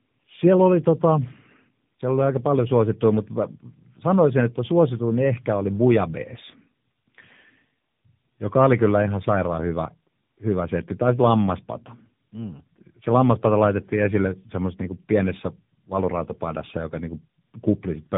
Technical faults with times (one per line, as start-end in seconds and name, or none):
0.00-18.17 tandem speech coding